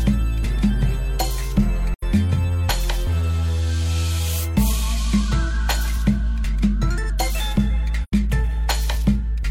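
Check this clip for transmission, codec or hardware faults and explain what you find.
The music drops out twice, at 1.94 to 2.03 s and 8.03 to 8.13 s: soft-faded silent gaps of about 85 ms. This is AAC frame loss with muting; each gap fits two lost frames whose spectra were zeroed, with overlapping windows smoothing the edges.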